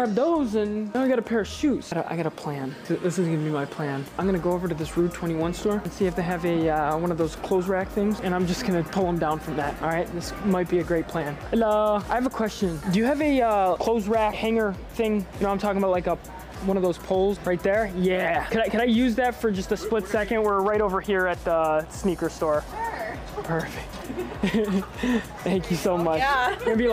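No technical faults can be heard anywhere in this audio.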